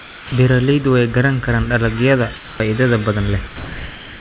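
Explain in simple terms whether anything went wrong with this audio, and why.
Two kinds of fault can be heard. From the start to 0.32 s, and again from 2.36 to 2.6 s, there is comfort noise in place of the background. The natural room hiss becomes a flat, slightly quieter, featureless hush. The likely cause is the caller's system pausing transmission during silence while the receiving end fills the gap with imitation noise. No speech is lost there, which sets it apart from the next fault.

From 3.47 s to the end, sound is dropped by the voice detector. The speech fades into that same steady hush and doesn't come back. About 0.39 s of real sound is missing. The system likely mistook part of the speech for background and stopped sending it.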